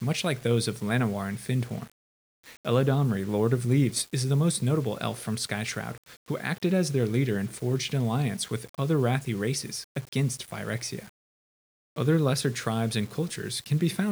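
No technical faults are present in the speech signal, which is carried at 8 bits per sample as intended.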